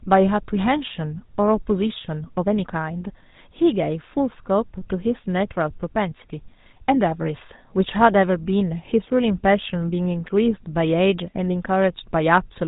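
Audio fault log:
Throughout: GSM full-rate codec. The speech sounds buzzy and gravelly, and nothing comes through above 3.8 kHz. The codec fakes the voice with pulse-driven vocal-tract modelling, which fits a rate of about 13 kbps.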